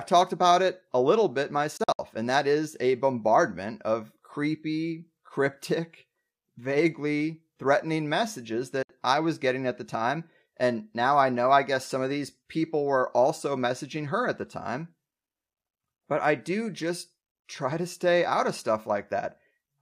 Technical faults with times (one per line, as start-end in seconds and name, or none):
1.77-1.99 Bluetooth dropout
8.82-8.90 Bluetooth dropout